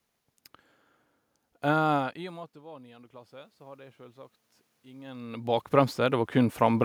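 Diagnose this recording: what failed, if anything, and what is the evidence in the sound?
Automatic gain rising, in the call-processing stage. The input level dropped by about 22 dB around 2 s, when the talker moved away. From 1.61 s to 6.8 s, voice and room noise then swell together by about 10 dB as the AGC gradually raises its gain to compensate.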